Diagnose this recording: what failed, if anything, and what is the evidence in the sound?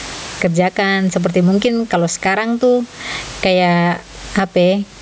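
Gain pumping throughout, in call processing: the gain swings by about 20 dB, likely excessive gain driving fast limiting.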